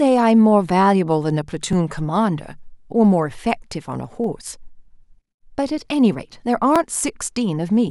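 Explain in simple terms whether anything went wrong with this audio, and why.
The speech was handled in 2.5-second chunks, and each chunk began slightly before the previous one ended. These overlapping chunks replay about 13 ms of sound at every join, heard as small regular clicks or stutters at 1.73, 4.24 and 6.76 seconds.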